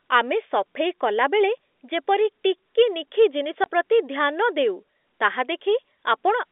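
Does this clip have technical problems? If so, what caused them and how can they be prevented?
Yes. From 3.64 to 3.66 s the speech drops into a 20 ms hole of pure silence. This is packet loss filled with silence: one packet's worth of audio is missing from the telephone-band G.711 stream. A concealed loss would smear or repeat nearby sound across the gap, but here nothing fills it. Packet loss concealment plus a jitter buffer with some redundancy would prevent it.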